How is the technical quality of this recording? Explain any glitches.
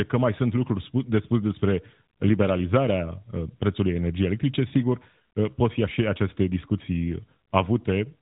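No glitches: the speech carries the band limit of an AMR narrowband mobile codec path, with nothing above about 3.8 kHz and only light coding artefacts that fit the 12.2 kbps mode.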